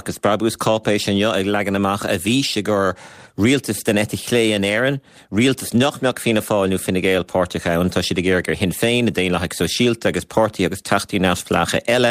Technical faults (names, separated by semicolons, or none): none